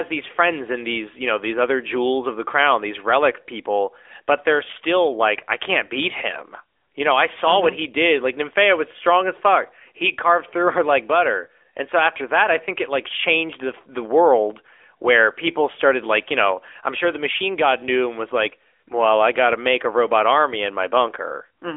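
From start to finish this speech sits inside a phone line. It's the AMR narrowband mobile codec, and you can hear it plainly. The band runs from roughly 300 Hz to 3.5 kHz and there's nothing at all above about 3.6 kHz, so sibilants lose their edge and the low body is gone too. The codec rebuilds each 20 ms frame from a vocal-tract model plus a few pulses, which gives the voice that buzzy, synthetic grain. The degree of it fits a mid-rate mode, around 10.2 kbps.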